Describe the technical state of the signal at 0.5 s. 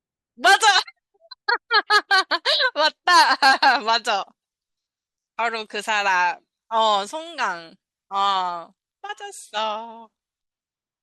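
At 0.5 s the signal is intact, with no dropout, clipping, distortion or other fault in the speech at that moment.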